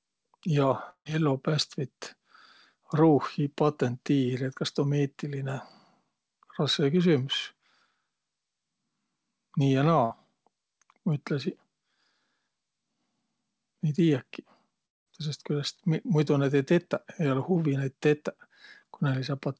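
At 0.90 to 1.07 s the speech breaks off for about 160 ms. The last sound is stretched into a fading buzz or hiss, then about 80 ms of near-silence follows before the speech resumes further along, most likely from a long network dropout. At 10.05 to 10.12 s a burst of packet loss removes about 60 ms. The receiver holds the preceding sound and fades it, leaving a brief held buzz or fading hiss in the gap. At 14.86 to 15.08 s a second likely dropout removes about 200 ms, and about 190 ms of that sounds nearly silent. Across the whole clip, the call codec's band limit means there is nothing above 8 kHz.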